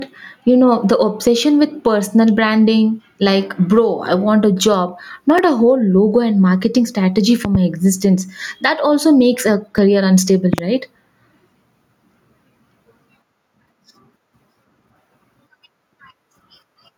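Speech recorded with three audible faults. Gain pumping runs through the whole recording, with the gain swing reaching around 10 dB. The dynamics sound flattened and squashed. The likely cause is input gain set well above what the microphone needs, with a fast limiter or compressor pulling the level down on every peak. A repeated buffer occurs at 5.38 s, between "I want a job" and "a whole logo and", and again at 9.78 s, just before "unstable right". At each point a very short slice of audio plays a second time with a hard edge at the join, heard as a click or brief buzz. The repeated segment is about 5.8 ms long, which fits a 256-sample buffer being replayed when fresh audio did not reach the output in time. A loud pop appears from 7.45 to 7.57 s, after "logo and marketing strategy" and before "existence that also makes", and again from 10.53 to 10.61 s. Each event is a pair of sharp transients standing around 15 dB above the programme level, and the speech continues unbroken beneath them. 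A voltage spike or step entering the signal chain, from a connector, switch, static discharge or driver glitch, is the likely source.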